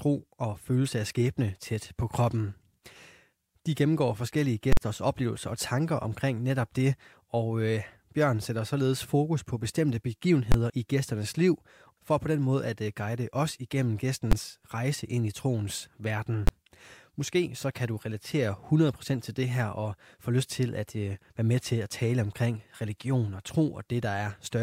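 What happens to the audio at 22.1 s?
Nothing goes wrong at 22.1 s; the speech carries on intact through that moment, with no dropout, click, distortion or other fault to be heard.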